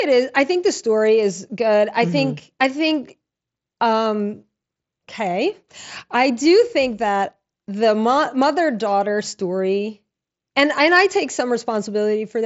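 No technical faults are audible.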